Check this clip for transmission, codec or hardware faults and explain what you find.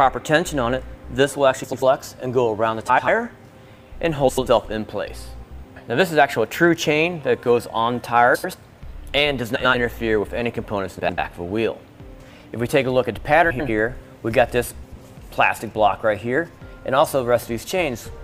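The clip has one recurring transmission fault, frames out of order, at 1.63–1.83, 2.88–3.08, 4.28–4.48, 8.35–8.54, 9.55–9.75, 10.99–11.18, 13.50–13.69 and 14.82–15.02 s. Each time, two adjacent blocks of about 93 ms arrived swapped and were decoded that way, which fits runs of four frames each. The sound stutters in a garbled flutter, and no time is lost.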